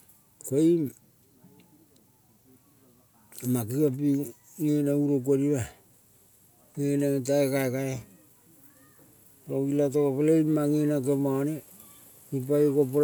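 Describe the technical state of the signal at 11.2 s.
At 11.2 s the signal is intact, with no audible technical fault at that moment.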